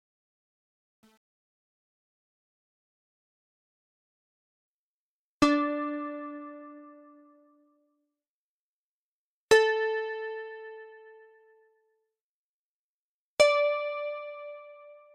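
From 0.0 to 4.68 s the fade-in suffers truncation distortion: the gain stage drops low bits without dither, consistent with about 9-bit resolution, so quiet levels become coarse steps. It is worst until 4.03 s, gritty, and, unlike steady hiss, it clears as the level rises.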